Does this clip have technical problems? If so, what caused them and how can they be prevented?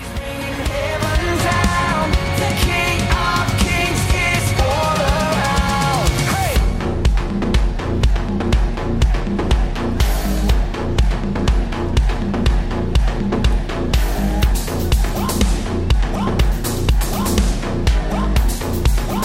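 No, nothing in this recording points to a technical fault, so there is no cause to trace and nothing to prevent.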